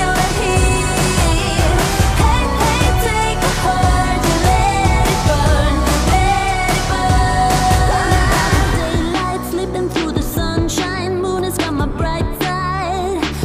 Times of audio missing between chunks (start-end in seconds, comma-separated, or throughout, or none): none